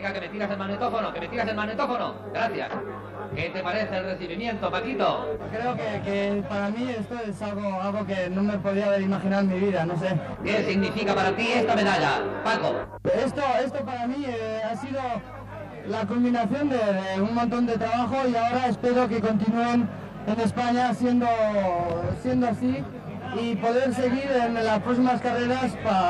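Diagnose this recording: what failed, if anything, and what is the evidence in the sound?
Channel delay, with comb filtering, runs through the whole recording. The fault sits at the driver or buffer stage. One channel arrives around 20 ms behind the other, a lag too long for a wiring error and typical of a misaligned buffer. When the channels are summed to mono, shared content cancels at evenly spaced frequencies, with the first notch near 30 Hz. The notches stay fixed, and at this length of delay the sound is rough and slightly doubled from start to finish.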